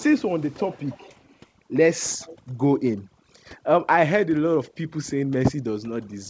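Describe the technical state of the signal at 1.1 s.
At 1.1 s the sound falls inside an echo leak running from 0.53 to 1.36 s. A delayed copy of the speech trails it by about 290 ms and sits roughly 25 dB below it. The likely cause is a far-end echo canceller that let part of its loudspeaker pickup travel back down the line. Because it repeats the same voice at a fixed lag, it differs from crosstalk or a second talker.

Overdone noise removal also acts here, as it does across the whole clip. The suppressor pulls individual frequency bands down whenever they resemble its noise estimate, so the background breaks up into twinkling, warbling specks and low-level parts of the speech are carved away with it. Unlike steady codec noise, these artefacts appear and vanish band by band. The G.722 path's cut-off at 8 kHz is a separate, constant bandwidth limit.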